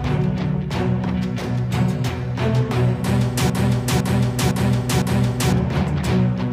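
A broken-record loop runs from 3.50 to 5.53 s: a 0.51 s fragment repeats four times back to back, likely from a stalled player re-sending its last buffer, so the intervening audio is lost.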